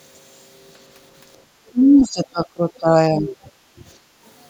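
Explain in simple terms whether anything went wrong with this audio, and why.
Two things went wrong, both tied to the echo cancelling on a call. From 1.71 to 2.94 s, and briefly from 3.14 to 3.29 s, the speech sags and partly drops away. That is speech suppressed in double talk, likely from the canceller mistaking overlapping talk for echo and turning it down.

Later, from 3.57 to 3.79 s and again from 4.0 to 4.22 s, the room sound behind the speech briefly drops out and then returns. This is background gated by the echo canceller, which pulled the microphone down sharply for about a fifth of a second each time while the loudspeaker was playing.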